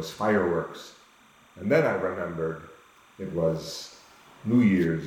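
From the start of the clip to its end, a timecode bleed sits behind the sound: linear timecode running at 30 frames per second has leaked in from an adjacent track or cable. The code is a square wave flipping between tones around 1 and 2 kHz, so it comes through as a continuous, even chirping warble. It sits roughly 35 dB below the main signal, low but steady.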